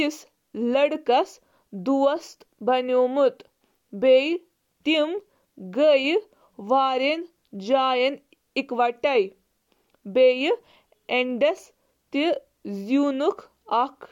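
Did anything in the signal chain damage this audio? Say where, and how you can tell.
No, nothing damaged this audio.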